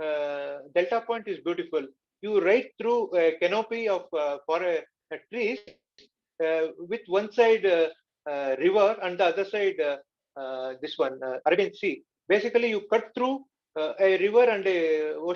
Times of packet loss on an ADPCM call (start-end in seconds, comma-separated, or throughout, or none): none